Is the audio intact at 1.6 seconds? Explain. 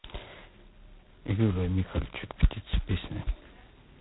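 No. At 1.6 seconds, as throughout the clip, G.726 ADPCM damage is heavy, consistent with about 16 kbit/s: coding each sample's prediction error in very few bits leaves a harsh, rasping hiss that tracks the speech level. On a spectrogram, nothing appears above 3.9 kHz.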